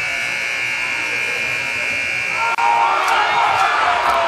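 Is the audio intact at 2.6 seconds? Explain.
No, a gap of about 32 ms cuts through continuous sound from 2.55 to 2.58 s, with smeared edges, then resumes: a gap at a join of encoded pieces, where untrimmed encoder delay and padding remain.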